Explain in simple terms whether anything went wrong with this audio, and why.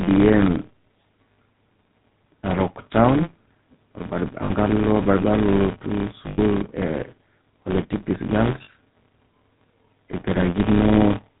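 A few things went wrong here.

The first is a filter restarted on every block. Some processing step forgets where it was each time a new chunk of audio arrives and starts that chunk from scratch. Each restart leaves a tiny click, and because they come about 172 times a second, the clicks merge into a low buzz that sits under the speech and gets louder and quieter with it. That rate fits chunks of 256 samples.

Second, the whole clip has been through the GSM full-rate codec, the old mobile-phone speech coder, and the damage is plainly audible. It rebuilds the voice from a rough model of the throat and mouth fed with regular pulses, so the speech comes out buzzy and gravelly. It also throws away everything above 4 kHz, which is why the voice sounds muffled and phone-like.

Third, there are lost GSM frames at four points: 1.32 to 1.38 s (60 ms), 4.44 to 4.51 s (60 ms), 6.28 to 6.39 s (100 ms, the longest), and 8.64 to 8.69 s (40 ms). 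When a chunk goes missing, the decoder repeats the last good one. Instead of a gap you get a brief rough, metallic ringing smear where the speech should be.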